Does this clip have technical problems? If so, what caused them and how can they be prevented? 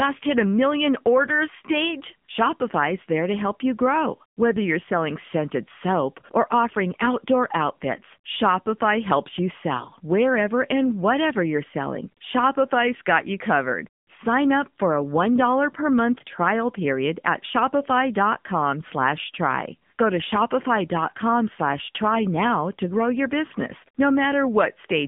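Yes. AMR narrowband mobile codec damage runs throughout: the speech is rebuilt from a vocal-tract model at what sounds like about 8 kbps, so it turns buzzy and synthetic. The band is held to roughly 150 Hz to 3.5 kHz, and nothing above 3.6 kHz survives. To prevent this, record locally or use a wideband path instead of a narrowband mobile call.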